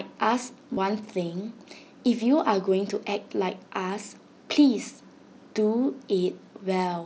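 From 0.74 to 0.77 s, concealed Bluetooth headset packet loss repeats a short slice of recent waveform, giving a brief buzzy held tone and a slight warble rather than a silent gap.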